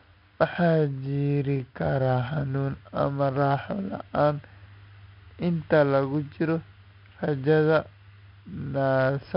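A speech recording with a gritty hiss riding on every louder passage, rising and falling with the level, rough distortion on sharp onsets, and a dull top with nothing above 5.3 kHz throughout. This is heavy 4-bit ADPCM compression at a rate that points to about 44 kbps.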